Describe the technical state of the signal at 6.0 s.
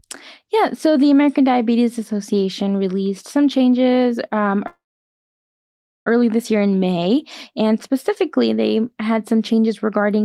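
At 6.0 s the speech is stopped inside a call audio freeze running from 4.67 to 6.08 s. The last sound trails off briefly, then about 1.28 s of silence. Packets were likely held up, emptying the jitter buffer. Nothing is lost. The speech resumes late.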